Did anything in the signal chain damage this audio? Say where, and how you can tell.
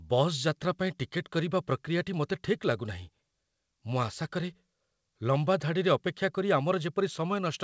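No, nothing in the chain damaged this speech; it came through a WebRTC call path whose content stops at 8 kHz, which fits a wideband call codec such as G.722 at 64 kbps, and that band limit is normal for the link.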